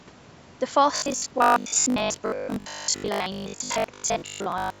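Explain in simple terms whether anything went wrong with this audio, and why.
From about 0.96 s to the end, the speech turns into a stiff, metallic buzz. This is robotic sound from repeated short buffers. The buzz sits at a steady 50 Hz, so each repeated slice is about 20 ms long. Roughly seven tenths of that stretch is repeated audio, so much of the real speech is skipped. The likely cause is that new audio stopped arriving often enough, and the software kept replaying its last short slice to fill the gaps. The sound also has its lowest bass removed, which fits normal call microphone processing.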